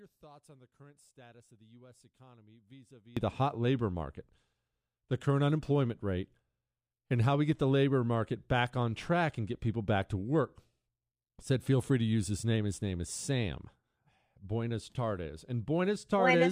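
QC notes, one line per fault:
0.0 to 3.17 s, one channel inverted: the speech drops by about 26 dB to a faint copy, until it snaps back just before "the hot labor market". That's likely one side flipped in polarity, so when the two channels sum to mono, everything they share cancels out and all that's left is the small difference between them.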